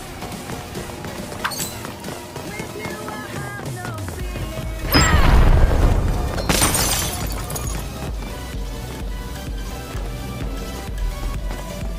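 From the start to 8.18 s the audio runs about 1.09 times fast and sits about 1.5 semitones sharp. This is a wrong sample rate, which fits 44.1 kHz material played at 48 kHz. Unlike a pitch shift or time-stretch, speed and pitch move together.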